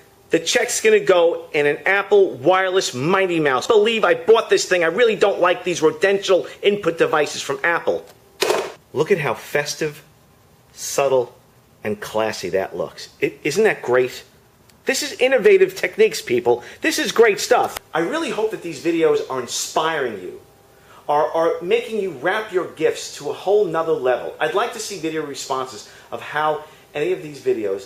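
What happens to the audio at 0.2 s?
Nothing goes wrong at 0.2 s; the audio there plays through intact, with no dropout, click, distortion or other fault to be heard.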